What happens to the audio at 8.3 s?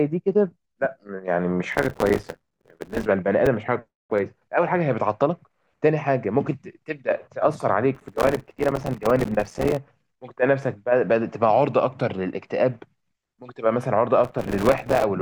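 At 8.3 s the speech is caught in a burst of processor overload crackle running from 7.95 to 9.77 s. Buffers of a few milliseconds keep missing their deadlines and drop to silence, roughly two hundred times. That dense run of tiny hard-edged gaps sounds like gritty tearing, unlike a single dropout.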